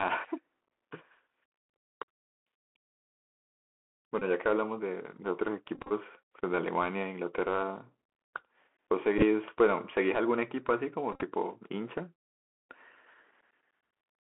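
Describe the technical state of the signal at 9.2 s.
Right around 9.18 to 9.23 s you get a Bluetooth headset packet repeated fault. The link drops packets there, and instead of going quiet the headset chip decodes the previous packet's bits again. It sounds like roughly 22.5 ms of loss scattered over about 37.5 ms, which fits around six lost packets. The longest unbroken run is only a few milliseconds, so you hear a short cluster of ticks, not the sustained 267 Hz drone that the 3.75 ms repeat produces over a long run.

Underneath all of that, the Bluetooth CVSD headset codec is doing plainly audible damage. CVSD sends one up-or-down bit per sample at 64 kHz and keeps adapting its step size. Here the line only passes about 250 Hz to 3.4 kHz, so everything above that is gone. Loud high-frequency energy outruns the step and distorts, s sounds come out scratchy, and a grainy hiss sits under the speech.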